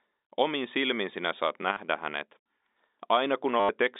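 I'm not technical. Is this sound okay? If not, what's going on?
No. Twice the connection dropped pieces of audio, packet loss with last packet repeated, and the receiver replayed the last piece to fill each gap. You hear a brief robotic stutter just after "silmin sinä saat" from 1.73 to 1.77 seconds, and a longer one from 3.6 to 3.69 seconds.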